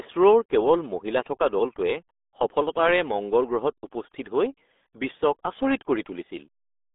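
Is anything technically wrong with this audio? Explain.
Yes. Throughout the speech, the audio carries the RealAudio 14.4 codec's signature. Nothing passes above 3.8 kHz, and the band sits roughly between 250 Hz and 3.6 kHz. The heavy gargle and muffling point to a very low rate of around 8 kbit/s, where the coder keeps only a crude outline of each sound. A plain telephone band-limit would sound thin but clean. Here the damage gurgles and smears within the band as well.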